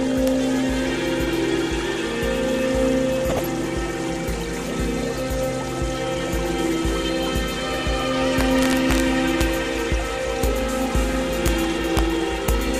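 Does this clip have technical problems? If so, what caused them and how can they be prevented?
Yes. Integer overflow is heard at 0.28 s, from 8.41 to 9.00 s, and at 9.41, 10.44, 11.46, 11.97 and 12.49 s. Each time a peak pushes past the largest value the integer path can hold, by only about 0 to 2 dB, the sample wraps to the opposite sign instead of stopping at the limit. That full-range flip produces harsh cracks far sharper than clipping. Prevention: use saturating arithmetic or headroom before any gain or summing stage so overs are clamped rather than wrapped.

DAB burbling runs from 3.09 to 3.46 s. Weak reception let bit errors slip past error correction into the MP2 stream, at a low error rate of around 0.15 percent, across a span that points to roughly sixteen corrupted frames. Wrong samples put short blips of noise into single sub-bands there. Prevention: improve the antenna or signal strength, or mute or conceal frames that fail their error checks.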